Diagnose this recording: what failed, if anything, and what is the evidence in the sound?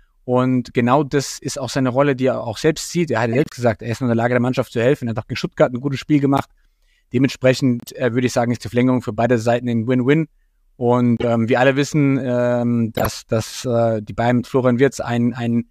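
Codec stage: corrupt frames decoded, heard as glitches at 3.33, 6.37, 7.80, 11.17 and 12.92 s; flipped bits misplace energy, showing as off-band spectrogram smears.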